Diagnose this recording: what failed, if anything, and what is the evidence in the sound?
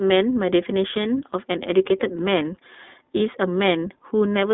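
The codec stage is at fault: the speech is confined to roughly 250 Hz to 3.7 kHz and sounds plainly rough and synthetic throughout. That is the iLBC codec coding each 20 ms frame independently, which fits its 15.2 kbps mode. Ordinary narrowband telephony lacks this rough, synthetic edge.

The network stage shows lost iLBC frames from 3.18 to 3.21 s: a brief held, faintly buzzy vowel where the decoder repeated the last pitch cycle with added noise, which fits a single lost 20 ms frame. Unlike a dropout or a click, the gap is filled, and the voice is right again almost at once afterwards.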